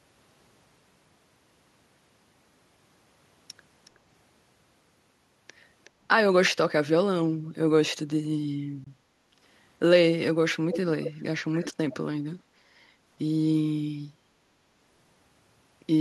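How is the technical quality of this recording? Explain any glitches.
The speech has two kinds of glitch: brief echo leaks and a single Bluetooth dropout.

Echo leak: scraps of a delayed copy of the speech appear at 3.85–3.9 s and 5.84–5.9 s, very faint (about 35 and 30 dB below the speech) and trailing by 369 ms. They return at 10.71–10.8, 11.02–11.14 and 11.59–11.73 s, much louder (about 10 to 15 dB down) and trailing by 597 ms. The likely cause is a far-end loudspeaker whose echo canceller let part of the pickup return down the line. Unlike room reverberation, which smears smoothly, these are distinct repeats at a fixed lag.

Bluetooth dropout: at 8.84–8.87 s the output falls silent for about 20 ms, then resumes further along, as though the speech kept playing underneath. That length fits one lost packet, likely a packet that failed to reach the headphones in time. A codec or network concealment gap would usually be patched with smeared or repeated sound. 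This hole is clean silence.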